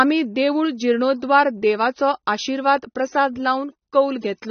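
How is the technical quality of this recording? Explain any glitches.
The speech is plainly degraded throughout the whole clip. The sound is most likely AAC compression, consistent with AAC-LC at roughly 27 kbps. Coarse quantisation of the frequency lines leaves sibilants dull and smeared, and a spectrogram would show a lowered top cut-off with patchy holes or noise-filled bands.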